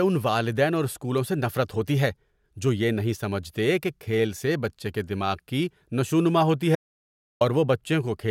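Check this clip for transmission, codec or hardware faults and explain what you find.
One fault is audible in this speech clip. An audio dropout to silence runs from 6.75 s to 7.41 s, right after "دماغ کی نشوونما ہوتی". The speech cuts off mid-flow and about 0.65 s of silence follows, with no room tone, before the sound returns. The likely cause is a brief loss of the input signal while the recorder kept writing silence, so whatever was said in that gap is gone.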